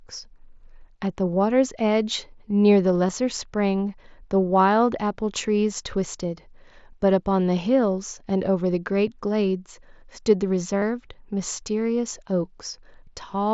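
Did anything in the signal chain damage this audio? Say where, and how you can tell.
Yes. Concealed Bluetooth headset packet loss appears on the wireless link at 3.07 s and at 10.79 to 10.82 s, about 30 ms. The receiver filled each gap by repeating the best-matching recent waveform, so each holds a brief buzzy tone before a slight warble.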